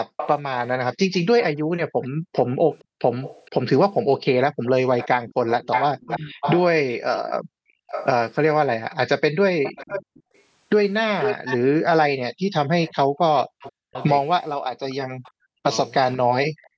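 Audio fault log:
0.07–16.69 s, echo leak: a delayed copy of the speech returns about 486 ms late, roughly 10 dB down, likely from a far-end loudspeaker the echo canceller failed to fully cancel.
1.66–5.29 s and 7.39–12.44 s, background gated by the echo canceller: room sound dips about 40 dB, around 1.5 s and 1 s in total, as the canceller clamps the microphone.
6.06–6.44 s and 12.91–16.77 s, speech suppressed in double talk: the talker's voice dips by about 40 dB, roughly 0.3 s and 1.5 s in total, likely because both sides spoke at once.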